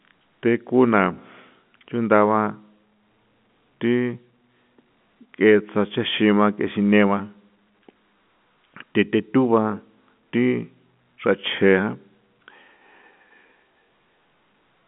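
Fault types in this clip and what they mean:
No fault types are present in this clip, so there is nothing to explain.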